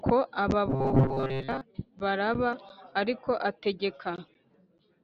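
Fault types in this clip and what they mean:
Robotic sound from repeated short buffers: From 0.70 to 1.61 s the speech becomes a rigid metallic buzz near 134 Hz. Most of it is likely one 7.5 ms chunk replayed.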